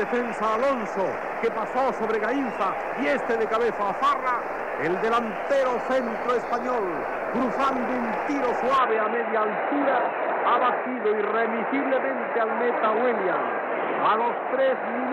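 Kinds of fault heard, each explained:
Input switched to a poorer device: From about 8.78 s to the end, the sound abruptly loses everything above 4 kHz and takes on a duller, boxier tone, with new faint background noise well below the signal, most likely because recording moved to a lesser microphone or headset profile. No gap marks the change and the level stays about the same. The fresh noise floor and altered colouring, not just a lost top end, distinguish it from a simple low-pass filter or codec bandwidth drop.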